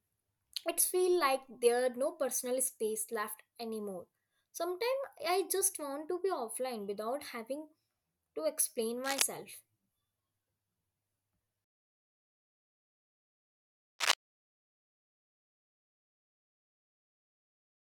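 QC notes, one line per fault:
9.04–9.22 s, cable scratch noise: just after "to explain", a brief uneven rustling burst about as loud as the speech, likely from a worn cable or connector shifting and making intermittent contact.
13.99–14.14 s, cable scratch noise: a similar dense scratching burst, somewhat louder than the speech, likely caused by contact resistance changing rapidly as the cable or connector moves.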